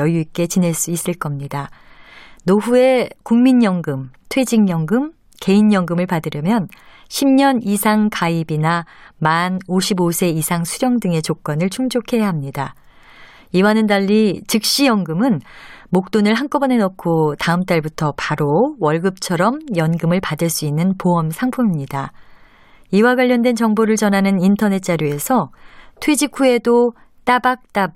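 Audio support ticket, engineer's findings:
No faults found on playback.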